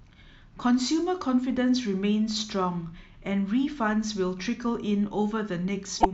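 At 6.00 s, just before the end, the speech jumps ahead and a short glitch runs to 6.05 s. This is most likely a broken MP3 bit reservoir: after a cut, about two 26.1 ms frames decoded their data from another frame's bytes.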